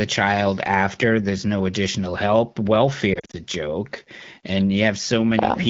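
Between 3.13 and 3.39 s the speech breaks up with lost AMR speech frames. About 120 ms of audio is missing, scattered across a 200 ms stretch in short gaps, none longer than 40 ms, which fits around six 20 ms frames failing their checks. The wideband decoder covers each gap by repeating the last good pitch and vocal tract settings at reduced gain. This is heard as quick dips and a brief warbling smear, with the voice returning weak or rough between gaps.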